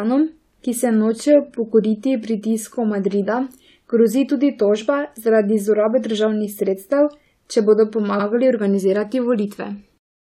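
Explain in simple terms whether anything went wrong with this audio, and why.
Something did go wrong, briefly. Right after "državnih sredstev če bodo", at about 8.19 to 8.26 s, the speech stutters: a sliver of sound about 70 ms long plays twice. This is repeated frames. A short run of compressed audio, which fits about three frames, was written or sent twice, so the player simply played it again. The clip is about 70 ms longer as a result.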